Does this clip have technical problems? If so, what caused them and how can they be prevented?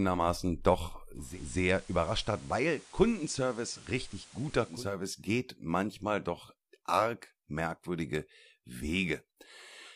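Yes. From 1.14 to 4.88 s, digital radio blending to analogue: a 263 ms cross-fade to FM adds hiss around 20 dB down and drops the level about 2 dB, returning just before "geht manchmal doch arg". A better antenna or receiver position that keeps the digital signal locked prevents it.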